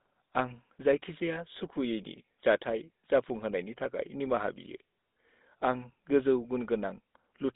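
GSM full-rate codec damage runs throughout the speech, from start to end. The codec models the vocal tract as a filter and excites it with a sparse train of regularly spaced pulses, discarding most of the excitation detail, which fits the 13 kbps full-rate mode. The result is a plainly audible buzzy, gravelly roughness on the voice. The sound is confined to a telephone band of about 200 Hz to 3.7 kHz, with nothing above 3.8 kHz.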